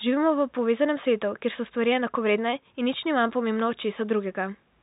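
Speech over a G.711 telephone-band path, with room noise sitting about 45 dB under it, and no technical fault to report.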